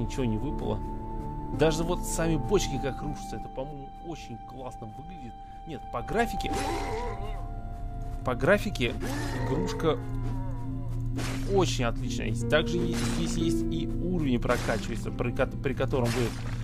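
Zipper noise appears twice. From 2.7 to 3.76 s the level drops about 10 dB in 3 dB steps, a few per second. From 5.74 to 6.4 s it climbs back about 10 dB, faster. Each unsmoothed jump clicks, so ticking rides on the sound.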